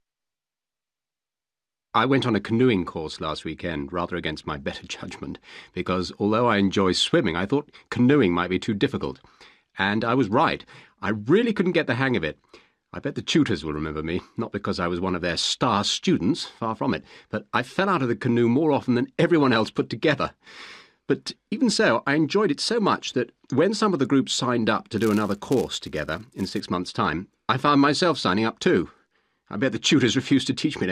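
Filter restarted on every block, from 24.98 to 26.62 s: the filter drops its stored state at each block boundary and restarts from silence, so every block opens with a small transient. These repeat at 188 Hz, which fits a 256-sample block, giving a buzz that tracks the sound's level.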